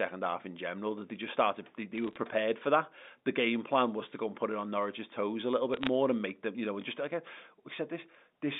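Bursts of bit errors on a digital phone line crackle at 1.96 to 2.16 s and 5.74 to 5.87 s. Roughly a few bits per thousand flip, each altering a single G.711 sample, and those hitting high bits give sharp ticks. Unlike packet loss, the speech underneath never drops out.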